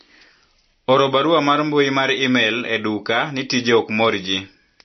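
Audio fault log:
Throughout, MP3 compression: the speech has nothing above 6.1 kHz and a plainly watery, swirly texture, since the encoder likely ran short of bits, which fits a bitrate around 32 kbps, so it cut the treble and let weak frequency lines flicker frame to frame.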